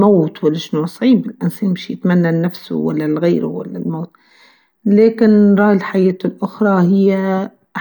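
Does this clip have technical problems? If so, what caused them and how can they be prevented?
No, there are no technical problems to point to in this speech clip. With nothing gone wrong, there is no cause to trace and nothing that needs preventing.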